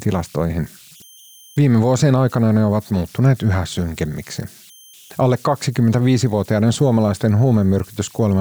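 All the way through this speech clip there are converter idle tones: a whistle around 3 kHz, about 31 dB below the signal. An undithered delta-sigma converter is falling into repeating bit patterns on small inputs, so the whistle shows in pauses and as grainy noise under quiet passages.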